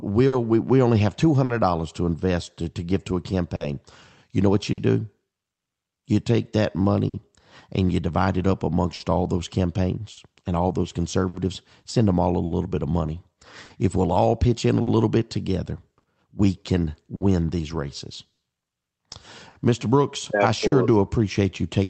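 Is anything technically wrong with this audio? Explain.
Yes, there are timing faults throughout, heard through a call path whose high end stops near 8 kHz, consistent with an Opus stream at 32 kbps.

Clock drift between sender and receiver: the sender's clock runs about 4% slow, so the jitter buffer keeps draining and the receiver compensates, giving uneven small hiccups across the whole clip.

Short stall from a late packet: at 0.27, 1.44, 3.56, 4.73 and 7.08 s a packet arrived late and the buffer ran empty. The last sound is held for 50 ms, then resumes with nothing lost, heard as a brief buzzy hold.

Repeated timing corrections: from 2.62 to 8.71 s the receiver stretches playback to about 98% speed, inserting roughly 150 ms in total through small repeated pieces.

Scattered short gaps: from 8.95 s to the end, about ten lost or late packets, each under about 50 ms, are patched by continuing the last sound. 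Together these cover about 5% of the stretch and are heard as occasional ticks or smears.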